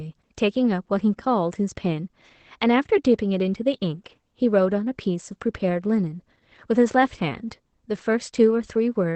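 From start to finish the speech carries Opus voice compression. Nothing is present above about 8.6 kHz, the wideband ceiling of the SILK linear-prediction coder, and the coarse excitation coding leaves the voice plainly hoarse, muffled and faintly robotic, which fits a bitrate around 12 kbps. A simple low-pass filter would only dull the top. Here the grainy, buzzy texture runs through the remaining band too.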